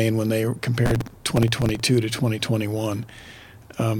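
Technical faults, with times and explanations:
0.86 to 1.80 s, processor overload crackle: Right after "when they", a gritty tearing rides on the speech for almost a second. The processor keeps missing its deadlines for very short audio buffers, which fits buffers of a few milliseconds each. Dozens are missed over that stretch. Each miss replays a scrap of old audio with hard edges. Those edges pile up into crackle, which stops once the load eases.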